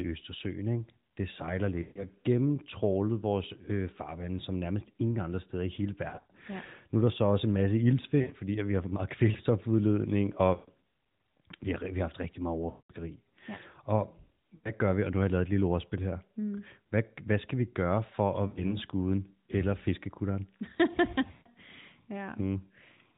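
Lost AMR speech frames at 1.82 to 2.06 s (after "ikke det sejler"), 6.10 to 6.33 s, 8.22 to 8.35 s, 10.54 to 10.70 s, 12.70 to 12.92 s, 14.56 to 14.72 s, 18.48 to 18.77 s and 21.32 to 21.49 s. Corrupted frames were concealed by repeating the last pitch and vocal-tract settings at falling gain, giving drawn-out, fading sound over 80 to 200 ms of lost frames in the light AMR narrowband coding.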